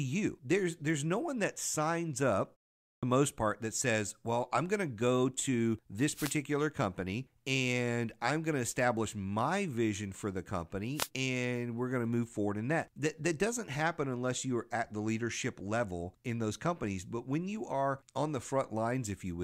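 At 2.81 s the speech resumes with a clipped start after a pause. Following a gap of about 0.33 s, the output device has gone idle, and while it wakes and resynchronises the first 216 ms of sound, up to 3.03 s, never reaches the output. The onset is cut away, so the speech begins abruptly, already partway into its first sounds.

Two wireless microphone noise hits follow, from 6.12 to 6.36 s and from 10.94 to 11.09 s. In each, the radio path of the analogue FM microphone fades as reflected signals cancel at the receiver. With the carrier weakened, receiver noise rises above the audio and masks it, giving a brief swish of static lasting roughly 0.24 s and 0.15 s respectively.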